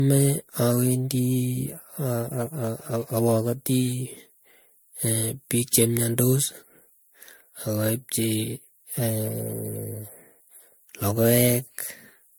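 Generation loss throughout the speech: swirly, hollow sound with blurred attacks, likely from about seven MP3 re-encodes, each requantising on a shifted frame grid.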